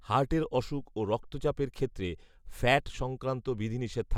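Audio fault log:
No audible faults anywhere in this speech recording.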